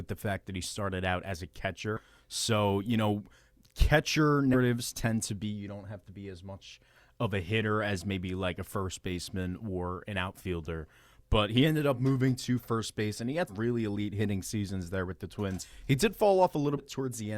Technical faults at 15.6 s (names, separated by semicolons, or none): compressed frames skipped